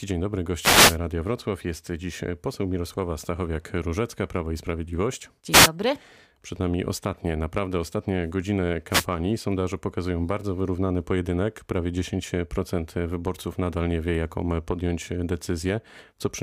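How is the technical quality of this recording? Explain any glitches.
Three wireless microphone noise hits break into the speech. The first runs from 0.59 to 0.98 s, right after "dzień dobry", then another at 5.51 to 5.69 s, and a third at 8.90 to 9.06 s, just after "ostatnie naprawdę ostatnie godziny". Each time the FM link's radio signal dips as reflections cancel it out, so the receiver's hiss climbs. You hear it as a quick swish or burst of static lasting about a sixth to two-fifths of a second.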